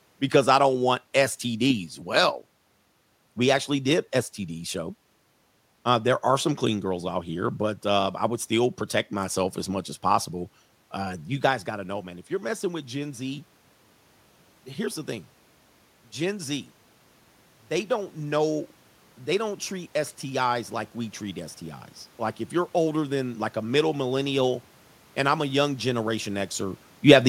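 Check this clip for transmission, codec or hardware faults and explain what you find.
One fault shows up, in the automatic gain control. From 4.72 s to 23.83 s, automatic gain rising slowly lifts the level by about 10 dB, so the speech and room noise swell together. It begins just before "millennial and I'm a". The level shifts near 11.5 s and 26.5 s come from the talker moving.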